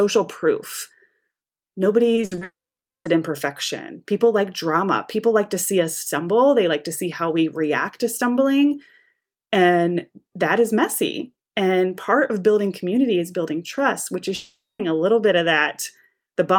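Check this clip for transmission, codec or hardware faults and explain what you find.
Transmission faults are present: a short burst of repeated packet loss that runs straight into a long network dropout, and a second dropout later on.

From 2.15 to 2.43 s there is repeated packet loss (robotic sound). Audio packets failed to arrive five times in quick succession, and each hole was papered over by stretching the preceding sound forward. About 140 ms was filled this way, half of that stretch, with the longest single gap 60 ms. The constant patching gives a choppy, mechanical, robotic texture with pieces of the sound missing.

Immediately afterwards, from 2.43 to 3.07 s, the sound cuts out, and again from 14.35 to 14.81 s. The likely cause is a long network dropout, where nothing arrives and the receiver can only extend the last sound briefly. In the first, 620 ms of audio is lost and about 540 ms is plain silence after a short fading tail. 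In the second, 440 ms is lost and about 200 ms is silent. When the sound resumes, the lost portion is not recovered.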